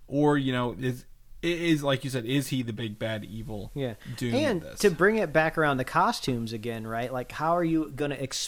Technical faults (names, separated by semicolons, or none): digital radio blending to analogue